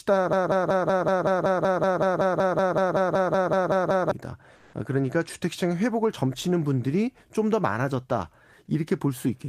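From 0.33 to 4.11 s, the playback or stream likely stalled and kept re-sending the last fragment it held, producing a broken-record loop. A 0.19 s piece of speech repeats exactly, twenty times back to back, and the audio that belonged there is lost.

From 4.55 to 4.73 s, the sender likely stopped transmitting during a pause, in a way that fits Opus discontinuous transmission, and the receiver filled the gap with comfort noise in place of the background. For those 0.18 s, the real background, about 34 dB below the loudest speech, becomes a smooth, featureless noise at the same level.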